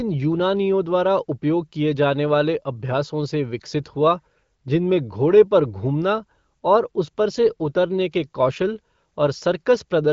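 Speech carried over the AMR wideband (HD Voice) codec at 15.85 kbit/s, with nothing above about 7.5 kHz, and no technical fault present.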